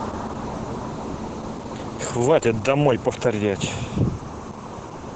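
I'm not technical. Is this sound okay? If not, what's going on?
No. Opus voice compression runs through the whole clip, from start to finish. To keep the file tiny, the speech is squeezed hard: the compressor throws away the higher frequencies above about 8 kHz, leaving a narrower band, and it rebuilds the raw buzz of the voice only roughly from a simple model. That heavy squeezing is why the speech sounds muffled and a bit hoarse, with a slightly robotic, synthetic edge.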